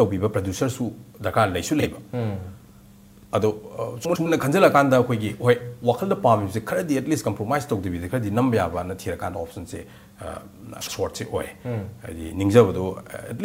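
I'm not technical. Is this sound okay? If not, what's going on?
No, there is a fault called frames out of order at three points: 1.80 to 1.86 s, 4.05 to 4.26 s, and 10.81 to 10.93 s. At each spot, two short neighbouring pieces of sound play in swapped order, so you hear a brief garbled flutter. The longest is at 4.05 s. Unlike a dropout or skip, no sound goes missing and the timing stays intact; it's only reshuffled.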